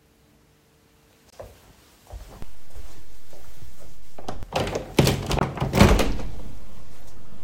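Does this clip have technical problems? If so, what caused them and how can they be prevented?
Yes. Two kinds of fault are audible.

Corrupt frame muted: abrupt silent holes at 1.30 to 1.34 s and 5.39 to 5.43 s, each about 40 ms long. Damaged compressed frames were rejected by the decoder and replaced with silence. The first gap fits one lost frame and the second fits two shorter ones. Protecting the stream with error checking and using decoder concealment would prevent these gaps.

DC step: a low thump at 2.42 s when the waveform's zero line jumps, another at 4.43 s when it returns, and a third at 6.00 s, where the offset then holds to the end. The sound itself continues unchanged underneath. A high-pass filter on the input, together with stable converter calibration, would prevent these steps.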